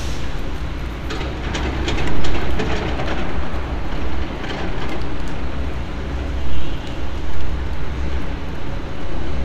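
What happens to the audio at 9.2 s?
At 9.2 s the crude rate conversion that starts at 2.67 s is still running and lasts to the end. Linear interpolation without a filter, which fits a 32 kHz to 44.1 kHz change, adds faint inharmonic fizz, roughly 50 dB down, that rises with loud, bright sounds rather than sitting steady like hiss.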